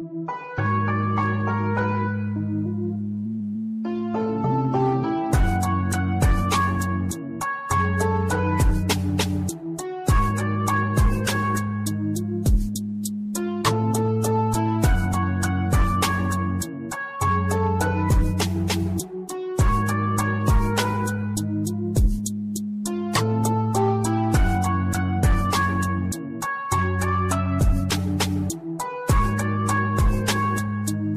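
No technical faults can be heard anywhere in this recording. The sound carries on steadily, with nothing that calls for comment.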